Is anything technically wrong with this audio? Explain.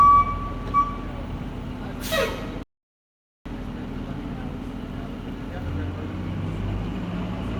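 Yes, there is one fault. A playback stall occurs from 2.63 s to 3.46 s. The player likely ran short of buffered data or had its output thread held up, so nothing was sent to the output until it caught up. The sound cuts out abruptly in mid-flow and the output stays silent for about 0.83 s, a gap long enough to register as a clear dropout, before the audio starts again at 3.46 s.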